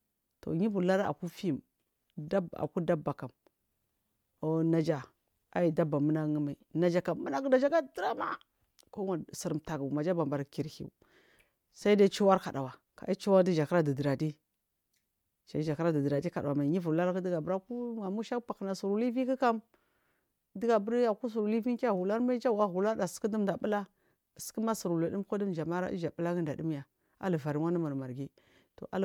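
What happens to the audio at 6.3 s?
Nothing goes wrong at 6.3 s; the speech continues intact through that moment, with no dropout, click, distortion or other fault.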